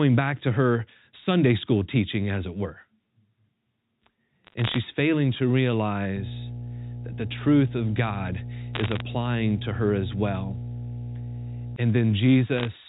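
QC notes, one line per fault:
4.44–4.78 s, 8.75–9.01 s and 12.57–12.67 s: bit errors on a digital phone line. Three short bursts of crackle sit over the speech, which itself is unchanged. On this 8 kHz, 8-bit mu-law line each flipped bit corrupts a single sample. A hit on the sign bit or an upper bit throws that sample far from its neighbours, giving a sharp tick. At an error rate under one percent, the ticks cluster into brief crackling patches.
6.16–11.76 s: mains hum. A steady low tone at 60 Hz with a few low harmonics runs under the speech for almost six seconds, around 10 dB below the speech level, so it is plainly audible. A ground loop or a nearby transformer is coupling the power line into the signal path. The tone stays constant in pitch and level, while the speech above it stays confined to the telephone band below 4 kHz.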